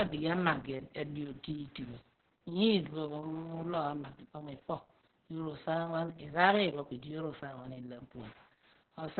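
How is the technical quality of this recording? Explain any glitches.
Technical quality is poor: heavy Opus voice compression throughout. The SILK coder squeezes the speech to narrowband, cutting everything above 4.3 kHz; coarse excitation coding, fitting roughly 6 kbps, makes it muffled, hoarse and slightly robotic.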